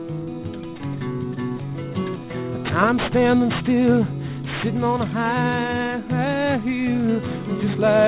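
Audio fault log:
throughout: aliasing. The audio was brought down to a rate that fits 8 kHz sampling without a proper low-pass filter first, so everything above the 4 kHz fold point mirrors back below it as false, unrelated frequencies. Sibilant and bright, high-frequency content comes out gritty and metallic rather than just dull, and the spectrum stays dense right up to the 4 kHz band edge. The folded energy sits roughly 15 dB below the wanted signal.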